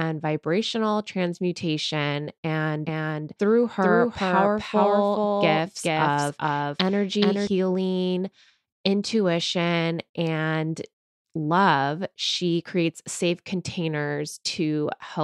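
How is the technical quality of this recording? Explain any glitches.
The recording has one clear glitch: a doubled audio track from 2.85 s to 7.47 s. For that stretch, a second, full-band copy of the speech runs roughly 400 ms behind the original at about the same loudness. It is most likely the same signal reaching the mix twice, once through a slower path, so the lag stays fixed. The copy carries no reverb tail or room colour, so it sounds like a dry, out-of-step twin, and it appears and vanishes abruptly at each end.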